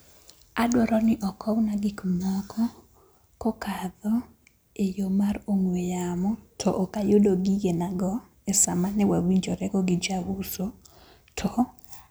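No technical faults can be heard anywhere here.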